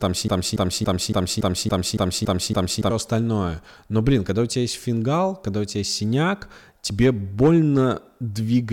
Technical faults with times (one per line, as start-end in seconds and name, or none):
0.00-2.90 broken-record loop